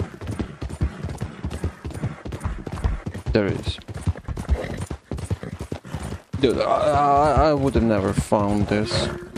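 No technical faults are audible anywhere in the clip.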